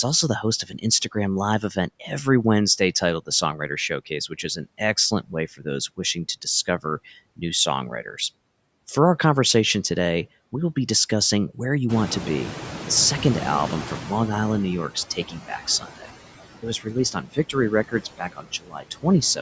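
Noise suppressor artifacts run through the whole recording: with the background pulled down by about 16 dB, the noise sinks between the words and rises under them. Unlike the cuts that follow, this is constant.

Speech cut by the noise suppressor comes in clusters at 0.43–1.16 s, 1.61–2.10 s, 2.79–4.80 s, 5.11–5.66 s and 5.97–6.85 s. Each time, the suppressor mistook brief stretches of speech for noise and ducked them by about 11 to 18 dB, so syllable edges sound swallowed. Within these spans only fractions of a second are actually hit.

At about 12 s the room noise jumps by around 18 dB. From 11.89 to 14.87 s the noise suppressor is catching up: the new noise leaks through with only about 11 dB of reduction and then sinks over roughly 3 s as the estimate adapts. Here it is the noise that changes level, not the speech.

Speech cutting returns at 14.95–16.09 s and 16.62–19.39 s. The drops are again up to about 18 dB but last longer, adding up to around half a second and then around a second, so quieter parts sound faint.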